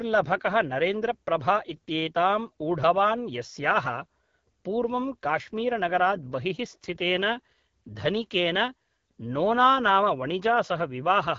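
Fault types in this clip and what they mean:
AMR wideband (HD Voice) codec: The speech is plainly rough and raspy throughout, which fits a low rate near 8.85 kbit/s. Nothing sounds above about 7.4 kHz.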